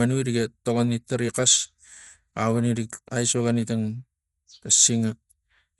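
Throughout the speech, the encoder has likely run Dolby Digital compression at a low bitrate, around 64 kbps by the sound of it. To save bits it has cut the band, so nothing remains above 11.4 kHz, and left many frequency lines without detail, filling them on decoding with noise. The codec damage is plainly audible: the speech sounds dull and muffled, with a rough, fluttering grain around its tonal parts.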